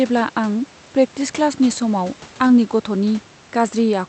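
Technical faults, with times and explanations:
2.47 to 2.51 s, short concealed packet loss: a brief smear in the speech as about 20 ms of audio failed to reach the decoder in time, so the receiver extended the preceding sound to cover the gap and then blended back into the real signal.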